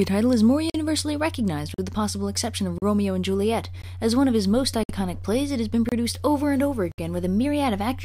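Gaps between stream segments open hard-edged silences at 0.70, 1.74, 2.78, 3.82, 4.83, 5.89 and 6.92 s, once per second, lasting 18 to 66 ms. Segment time stamps leave small holes that the player fills with silence, and no audio is lost.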